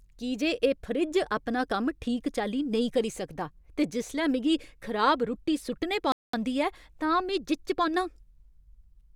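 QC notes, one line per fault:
6.12–6.33 s, playback stall: the speech cuts to silence for about 0.21 s, then resumes. The likely cause is the player running short of data.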